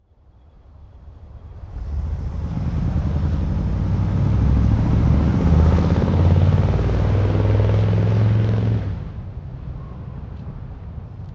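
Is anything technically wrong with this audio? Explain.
Yes. A wrong sample rate affects the whole clip. The audio is being played back more slowly than it was captured, with no rate conversion, so timing and pitch shift together. Everything runs at about two-thirds speed (0.667×) and sits about 7 semitones lower, roughly a perfect fifth down. That ratio fits material recorded at 24 kHz being played at 16 kHz. The result sounds sluggish, stretched and noticeably deeper than it should.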